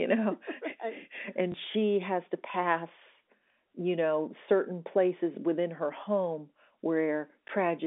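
At 1.52 to 1.54 s, just before "she has to pass", there is packet loss with the last packet repeated. One 20 ms stretch went missing, and the receiver played the previous packet again to fill it. The repeat is heard as a small blip. The same fault returns at 7.48 to 7.50 s. That gap is also 20 ms, which fits a single lost packet. The telephone-band G.711 sound carries on underneath.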